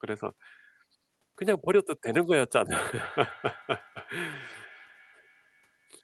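From 2.99 s to the end, a feedback echo between two devices appears. A second device replays this speech, and its microphone sends it back. Each phrase returns roughly every 0.3 s, thinner and ringing, peaking about 18 dB below the speech.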